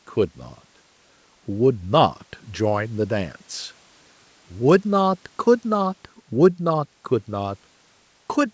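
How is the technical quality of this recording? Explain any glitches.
The technical quality of this recording is sound, with no glitches to explain, and the call microphone processing it passed through, which leaves nothing above 8 kHz, is working as it should.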